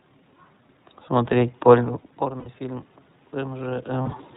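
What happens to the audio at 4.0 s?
Packets carrying the iLBC stream were lost between 4.02 and 4.15 s. These are lost iLBC frames: about 80 ms of audio went missing, scattered over 140 ms, with most of it in a single run. That fits four 20 ms frames. The decoder fills each gap by repeating the last pitch cycle blended with noise, so the speech briefly turns into a held, slightly buzzy vowel. Because each iLBC frame is coded without depending on the one before, the voice snaps back almost immediately after the final gap.

Underneath this, the automatic gain control has been rising since 2.18 s and keeps going until 4.29 s. The input level had dropped by about 18 dB, and the control responded by slowly adding about 4 dB of gain. Voice and room noise swell together over that span rather than jumping. The iLBC codec's narrowband, slightly synthetic roughness is present here as well, with nothing above 4 kHz.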